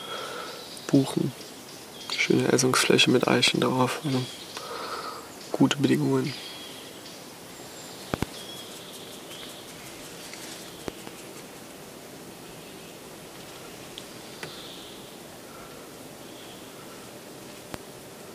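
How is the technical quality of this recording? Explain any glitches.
Loud pops mar the recording: single sharp pops at 3.48–3.50 s and 17.74–17.76 s, and double pops at 8.14–8.25 s and 10.88–11.10 s. Each jumps well above the surrounding sound, which continues beneath. They are likely voltage spikes from a switch, plug, static or driver glitch entering the signal chain.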